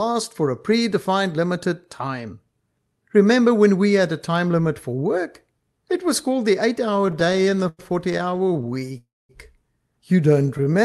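Repeated stalls (stutter) run from 6.93 to 8.95 s: packets kept arriving late, so the jitter buffer emptied 37 times, and the speech drags and hiccups as the last sound is stretched over gaps of up to 100 ms, filling about a quarter of that stretch. A call audio freeze follows at 8.97 to 9.31 s. The sound hangs for 0.32 s, a held buzz or hiss fading into about 0.22 s of silence before the speech resumes where it stopped, which points to packets likely held up in transit while the buffer ran dry. From 10.34 to 10.78 s a jitter buffer slow-down repeats single pitch periods to rebuild its reserve, adding 41 ms so the speech plays at 93% speed with unchanged pitch and a drawn-out feel. Overlapping it, repeated stalls (stutter) return from 10.40 to the end at 10.85 s, with eight brief gaps of at most 14 ms, a lighter flutter heard through the Opus call path's 12 kHz bandwidth.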